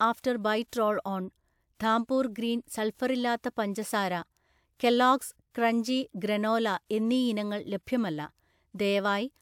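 No audible technical faults.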